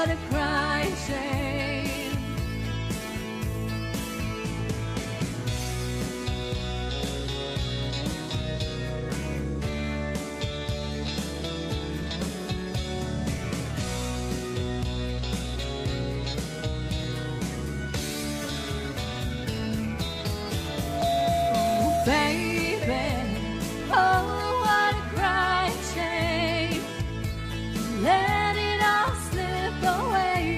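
The audio has two kinds of fault. There are three brief skips from overlap between stream segments, at 17.04 to 17.07 s, 21.02 to 21.06 s and 29.05 to 29.09 s. Each removes about 40 ms, and the waveform jumps straight across the cut. They fall on a 4-second grid, which fits segment boundaries where timestamps overlapped and the player trimmed sound that was never duplicated. No silence is inserted, which distinguishes this from a dropout or gap.

From 20.74 to 22.13 s there is a loudspeaker feedback squeal at 684 Hz. It swells over roughly a third of a second to about 5 dB above the rest of the audio. A microphone is picking up its own loudspeaker, and at that one frequency the loop gain exceeds one, so the tone feeds itself. That self-growth from nothing at a single pitch is what separates it from steady hum or a fixed interfering whistle. The skip at 21.02 s falls inside the squeal.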